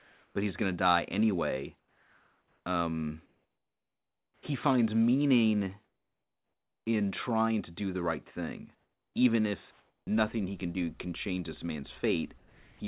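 Comfort noise in place of the background fills six pauses: 0.00 to 0.35 s, 1.79 to 2.66 s (after "going to die anyway"), 3.26 to 4.43 s (ending just before "he finds meaning"), 5.84 to 6.86 s (between "he finds meaning" and "in trying to do"), 8.75 to 9.14 s and 9.71 to 10.07 s. The room tone in each gap becomes a flat, textureless hiss, from about 1 dB to about 12 dB quieter than the real background. The likely cause is discontinuous transmission: the sender stopped sending during silence, and the receiver synthesised noise to fill it. Only the background changes character, which separates this from a dropout.

A sound dropped by the voice detector comes at 12.38 to 12.80 s. Here the steady synthetic noise arrives too early and swallows about 220 ms of the sound along with the pause. The likely cause is the detector misjudging that sound as background. The steady noise stands where the sound should be, and the sound is cut short rather than the pause being altered. 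Throughout the clip nothing is heard above 4 kHz, which fits a narrowband telephone codec.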